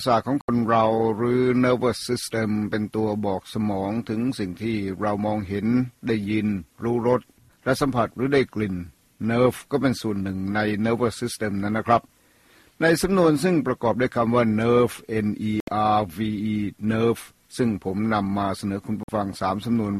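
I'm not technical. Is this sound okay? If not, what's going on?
No. There is digital broadcast dropout at 0.41 to 0.49 s, 15.60 to 15.68 s and 19.03 to 19.09 s. Each time, the receiver briefly lost usable signal and muted, leaving a gap of under a tenth of a second. That points to a few damaged frames, and the sound in those gaps is gone.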